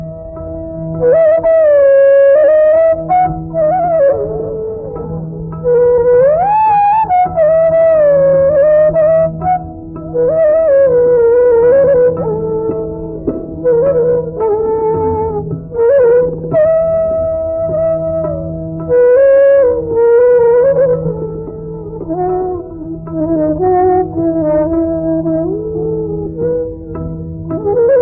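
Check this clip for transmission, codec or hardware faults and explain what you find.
Nothing in this one gives me any cause for concern, as the sound holds together the whole way and there are no faults to pick out.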